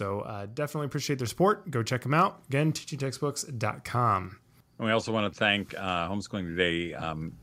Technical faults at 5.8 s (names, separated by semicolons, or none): automatic gain rising